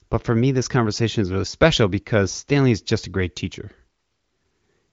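No faults present; the speech runs through an AMR wideband (HD Voice) path whose band ends near 7.5 kHz, and the coding damage is faint at most, which fits one of the codec's higher modes.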